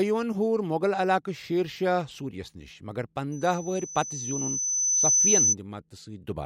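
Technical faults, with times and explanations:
3.32–5.55 s, loudspeaker feedback squeal: a pure tone at 6 kHz swells out of the speech over roughly two seconds and ends up around 10 dB louder than the talker. The microphone is hearing the loudspeaker it drives, and at 6 kHz the loop gain passes one. On a spectrogram this shows as a thin horizontal line that brightens steadily, and on the waveform as an envelope that keeps growing and then cuts off.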